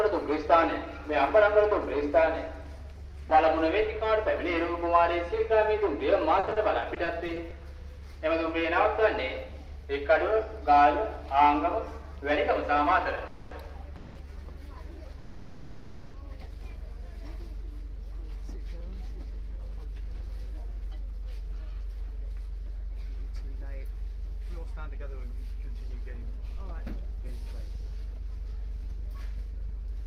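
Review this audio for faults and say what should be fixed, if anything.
From 6.39 to 7.53 s the sound turns choppy. This is repeated packet loss, heard as robotic sound. Ten short holes, none longer than 40 ms, are each patched by stretching the preceding sound. About 220 ms is filled this way and 140 ms is lost outright, so roughly a fifth of that stretch is concealment. Prevention: improve the network path or add forward error correction and packet redundancy so that isolated losses can be recovered.

Between 13.17 and 16.87 s there is a jitter buffer slow-down. The receiver repeats small pieces of waveform to rebuild its reserve, adding about 43 ms and playing at 99% speed with the pitch unchanged. Prevention: keep the buffer target stable, or adapt it more gradually, so the receiver does not need to stretch playback to refill it.

Three call audio freezes fall inside that slow-down, at 13.27–13.53 s, 13.96–14.17 s and 15.19–16.16 s. 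In each, the last sound is held as a fading buzz for about 240 ms, 190 ms and 950 ms respectively. Playback then resumes where it stopped, so nothing is lost, but the delay grows by the same amount each time. The likely cause is packets stalled in transit that empty the buffer. Prevention: reduce delay spikes on the network path.

Two jitter buffer speed-ups follow, at 18.81–20.59 s and 26.15–30.00 s. Each plays at 103% speed as the receiver trims short pitch-period slices to work off the delay built up earlier. Roughly 70 ms is removed in the first and 150 ms in the second, at unchanged pitch. Prevention: avoid the large delay build-up in the first place, or drain the excess more gently over a longer period.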